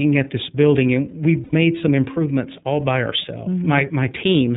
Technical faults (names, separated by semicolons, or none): iLBC codec; lost iLBC frames